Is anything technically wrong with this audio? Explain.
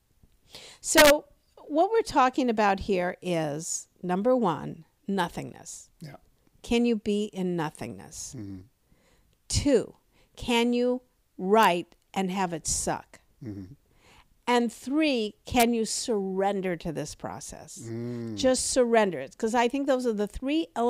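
Yes. Integer overflow occurs at 0.98–1.10 s, 11.63 s and 15.60–15.63 s. Peaks exceeding the integer limit wrap to the opposite sign instead of clipping, producing violent cracks, harshest at the first, driven about 4 dB over.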